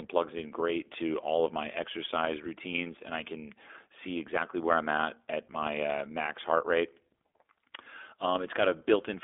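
A speech recording that sounds thin and boxed in from start to finish, with a slightly rough, synthetic grain and nothing above about 3.7 kHz. The band is confined to roughly 300 Hz to 3.5 kHz, as on a telephone line. The cause is the iLBC codec. It codes each short frame's excitation independently, which leaves plainly audible coding damage. The texture fits 20 ms frames at about 15.2 kbps.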